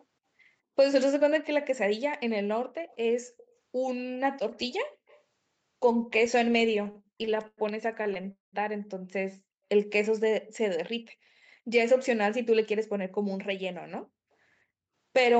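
A faint, delayed double of the speech appears at 2.88, 3.38 and 5.08 s, each only a brief scrap and about 30 to 35 dB below the voice, trailing it by roughly 0.21 s. This echo leak likely comes from a loudspeaker at the far end whose echo canceller let some residue through and sent it back.

From 6.71 to 7.59 s the speech drags and stutters through ten small holes, the longest about 0.1 s, with roughly a quarter of that stretch filled by stretched-out sound. A shorter run follows from 8.03 to 8.26 s, with four gaps, the longest about 22 ms. These repeated stalls (stutter) happen when packets arrive late, so the jitter buffer keeps emptying and the receiver prolongs the last sound until it can continue.

At 8.32 s the audio stops in a fading buzz that dies to silence for about 0.13 s, then resumes at 8.55 s exactly where it left off. This call audio freeze, about 0.21 s long, is likely a hold-up in the network that drained the jitter buffer, so a gap was inserted into the audio.

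Between 11.62 and 13.95 s the speech sounds hurried, running at about 107% speed with the pitch unchanged. In this jitter buffer speed-up, the receiver trimmed short pitch-period slices, about 0.15 s in total, to work off audio that had piled up in the buffer.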